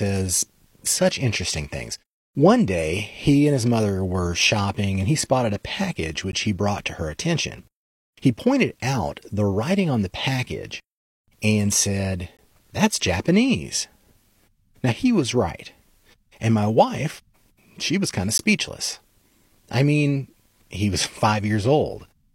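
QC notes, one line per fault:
6.32 s, 12.37 s and 18.38 s: gap between stream segments. Hard-edged silent holes of about 12, 19 and 14 ms fall after "he spotted a package", "and said" and "she was kind of". The holes recur roughly every 6 s, which points to 6-second segments whose time stamps leave a small gap that playback fills with silence. No audio is lost.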